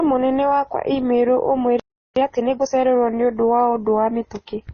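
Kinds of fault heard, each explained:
Transcoding between lossy codecs: likely MP3 then Opus in series; both codecs' artefacts sound together, and nothing is heard above 6.6 kHz, the lowest cut-off surviving.
Playback stall: from 1.80 to 2.16 s the speech stops dead for about 370 ms, likely the player running out of data before resuming.
Time-compressed catch-up: from 2.16 to 2.88 s speech runs 1.5 times fast at normal pitch, small pieces cut and cross-faded away.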